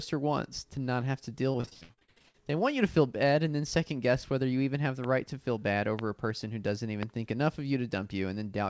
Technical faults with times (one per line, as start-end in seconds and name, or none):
1.52-2.52 repeated packet loss (robotic sound)
5.04-5.06 loud pop
5.99-6.01 loud pop
7.03-7.05 loud pop